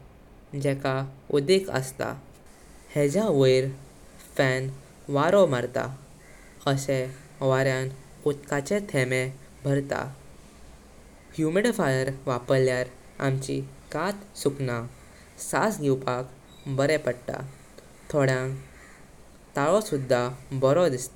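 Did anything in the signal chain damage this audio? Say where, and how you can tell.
No, nothing in the signal chain damaged this audio.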